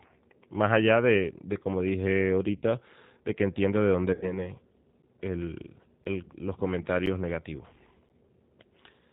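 Throughout, the speech carries G.729 codec damage. Nothing above 4 kHz survives. The sound is rough and synthetic, which fits an 8 kbit/s G.729A stream.

From 2.56 to 2.64 s, VoIP packet loss is concealed by the speech codec. About 60 ms is rebuilt as a buzzy tone or coloured noise that fades, consistent with two lost packets. At 4.13 to 4.48 s, the same thing happens. About 90 ms is lost, pointing to three packets. The sound stays weak or distorted afterwards.

From 5.02 to 8.10 s, periodic USB or driver dropouts occur every 1.024 s. Each cuts roughly 10 ms to silence. There are about four regular ticks.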